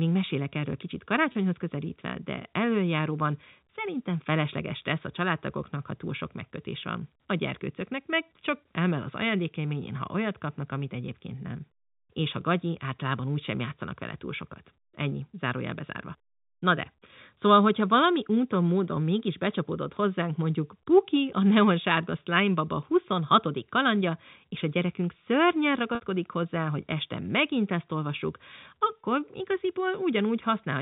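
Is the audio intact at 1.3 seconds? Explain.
No. Packet loss with pitch repetition hits from 1.32 to 1.35 s. About 30 ms, likely one lost packet, was bridged by repeating the last pitch period, so the speech briefly holds with a slight buzz.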